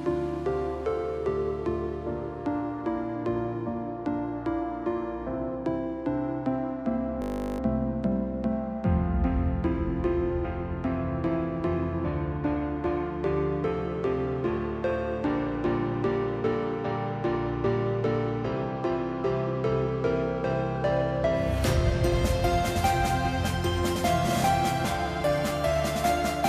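A system hang loop runs from 7.22 to 7.6 s. The computer or its audio driver stalled while the sound hardware kept replaying the same ring buffer, so one 20 ms slice of audio repeats exactly, 19 times in a row. Because the slice is so short, the repetition fuses into a steady buzz at 50 Hz rather than a stutter. Little or no audio appears to be lost when playback resumes, which fits a 20 ms buffer.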